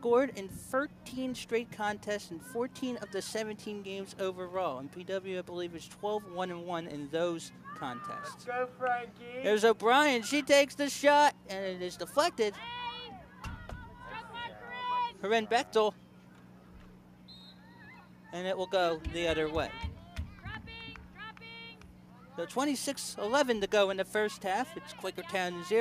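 No technical faults are audible.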